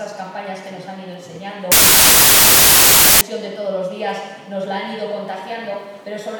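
From 1.72 to 3.21 s, samples built from the wrong bytes: misassembled bytes put the low-order bits on top, giving loud, harsh noise close to white on loud sounds.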